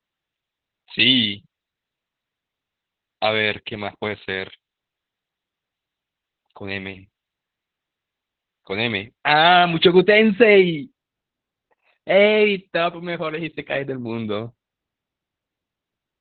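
From the start and throughout, the speech passes through Opus voice compression at a very low rate. The encoder has dropped to its SILK linear-prediction coder in narrowband mode, which fits a rate near 8 kbps, so almost nothing survives above 4.5 kHz and the excitation is coded coarsely. The damage is heavy: the voice is muffled and boxy, with a hoarse, slightly robotic grain that fits 20 ms coding frames.

From 0 to 9.85 s, pre-emphasis is left on. The treble lift applied for transmission was never undone, and the boost fits a J.17 curve, about 11 dB at 10 kHz relative to 1 kHz. With the band already capped near 4.5 kHz, the uncorrected lift tilts what remains toward its top end. That first stretch sounds thin, edgy and hissy on sibilants, until the balance settles after 9.85 s.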